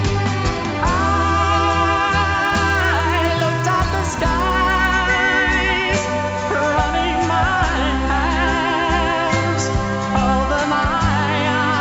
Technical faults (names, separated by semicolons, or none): resampler restarted on every block